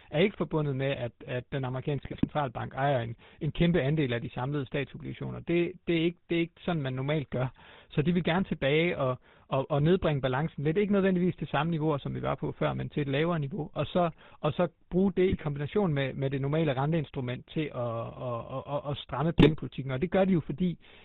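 GSM full-rate codec damage runs through the entire speech clip from the first second. The codec rebuilds the voice from a vocal-tract filter excited by sparse, regularly spaced pulses, discarding most of the excitation detail, so the speech takes on a plainly audible buzzy, gravelly roughness. Nothing survives above 4 kHz, leaving the top end dull and closed-in. The coarseness fits the old 13 kbps full-rate coder.

GSM bit errors first break in from 2.02 to 2.25 s, between "med at at den" and "ejer en en kæmpe", then again from 15.28 to 15.43 s, between "og så bruge det" and "med med det normale", and finally from 19.38 to 19.52 s, just after "at stramme". Corrupted filter, pitch and gain values reach the decoder, so frame after frame the spectrum bends or the level jumps, producing squawks, pops and gargling.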